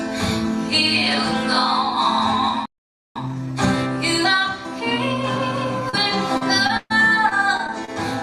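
At 2.65 s the audio cuts to silence for half a second, resuming at 3.16 s, a playback stall likely caused by the player running out of buffered data or being blocked. From 3.16 to 6.15 s the audio runs about 1.1 times fast at normal pitch, time-compressed catch-up as the player trims small pieces and cross-fades them to work off the backlog. Brief smears or wobbles at 5.89–5.95 s, 6.37–6.43 s and 6.67–6.71 s are short concealed packet loss: 20 to 40 ms of audio arrived too late and was patched by extending the preceding sound. At 6.77–7.05 s a held, fading tail and a short dropout, about 40 ms of silence, precede a jump forward: a burst of packet loss of about 140 ms, bridged by continuing the last sound while turning it down, with that stretch lost. Between 7.29 and 7.89 s the sound turns choppy, repeated packet loss (robotic sound) from four separate gaps, the longest 26 ms, each patched so that roughly an eighth of that span is filled-in sound.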